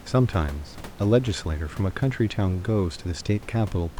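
No technical faults are audible.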